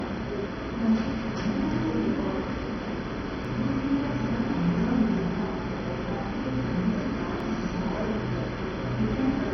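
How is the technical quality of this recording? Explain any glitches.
The technical quality is poor, with heavy low-bitrate coding damage throughout and two brief skips.

MP2 compression, throughout: nothing is heard above 6.1 kHz, and what remains sounds dull, gurgling and grainy. This is likely MPEG Layer II coding at a rate that fits roughly 32 kbps, where upper sub-bands are switched off and the surviving bands are coarsely quantised.

Audio missing between chunks, at 3.45 s and 7.40 s: the sound jumps forward abruptly, dropping a few tens of milliseconds each time. The skips fall about 4 s apart, likely because the processor discards a short piece whenever it closes one 4-second block and opens the next, then joins both sides without a gap.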